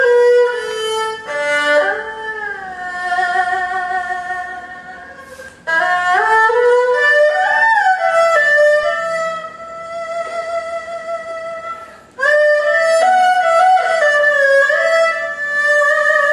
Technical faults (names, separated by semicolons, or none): DC step